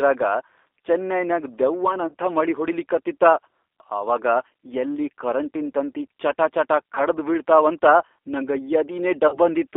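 The whole clip passes through the G.729 codec. The sound is confined to a line band of about 300 Hz to 3.6 kHz. Each 10 ms frame is rebuilt from a filter, a pitch predictor and a few pulses. The speech sounds plainly rough and synthetic.

Packet loss concealed by the speech codec follows three times. At 2.08–2.15 s, before "ಮಳಿ ಹೊಡಿಲಿಕತ್ತಿತಾ", 40 ms is lost. At 6.95–7.01 s, after "ಯಲ್ಲಿ ಕರೆಂಟಿನ್ ತಂತಿ ಚಟಾಚಟಾ", 20 ms goes. At 9.28–9.38 s, 40 ms drops. The decoder stretches each gap into a buzzy tone or a coloured noise that fades.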